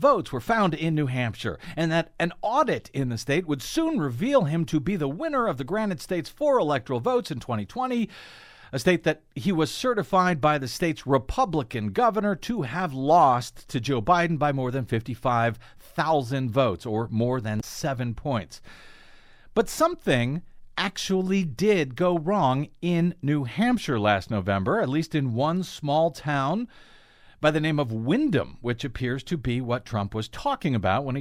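At 17.57 s, lasting about 68 ms, damaged data in the compressed stream makes the decoder lose sync, producing a brief glitch.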